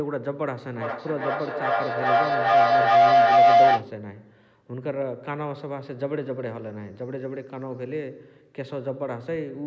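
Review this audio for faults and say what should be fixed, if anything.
Feedback howl from 0.75 to 3.93 s: two devices in one room on the same call close a microphone-to-loudspeaker loop that gains level each pass, narrowing to a tone near 700 Hz that pulses about every 0.4 s and peaks about 14 dB above the speech. Prevent it by muting one device or using headphones when sharing a room.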